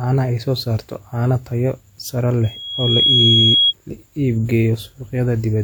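Right after "saarta caano tayo sare", at 2.44 s, a loudspeaker feedback squeal starts: the microphone is picking up the loudspeaker it feeds, and the loop gain at 3.3 kHz exceeds one, so that tone feeds itself. It swells over about 0.7 s to roughly 5 dB above the speech and stops at 3.74 s. A spectrogram shows a single bright horizontal line at 3.3 kHz that thickens as it grows. The waveform shows a steadily widening envelope.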